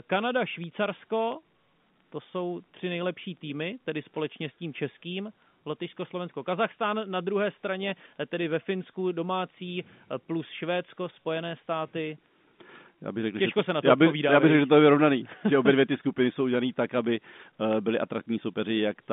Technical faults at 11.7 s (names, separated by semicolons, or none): none